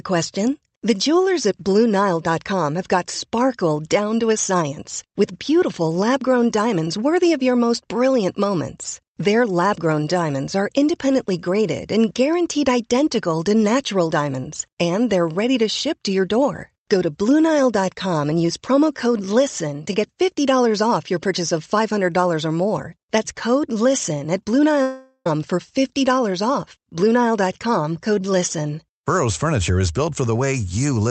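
At 24.82 s the speech breaks off for about 0.44 s, until 25.26 s, in what is likely a long network dropout. The receiver fills most of the gap, roughly 0.43 s, by stretching the last sound into a buzz or hiss that decays, with a brief stretch of near-silence near the end. Speech resumes at 25.26 s with the missing section simply skipped. The Opus call path stays band-limited at 8 kHz.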